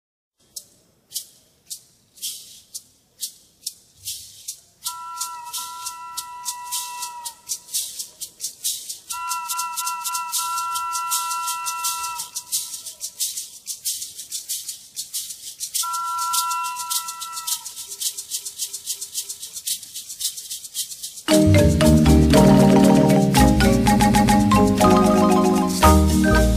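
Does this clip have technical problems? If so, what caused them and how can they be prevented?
Yes. Repeated frames occur at 9.50 to 10.34 s, 18.32 to 19.44 s and 23.94 to 24.36 s. A short run of compressed frames was written or sent more than once, so the decoder replays it. That makes a stutter. A 0.28 s block plays three extra times, then four extra times, and a 0.14 s block plays three extra times. Together these add about 2.4 s. Checking frame sequence numbers when writing or receiving the stream, and discarding duplicates, would prevent it.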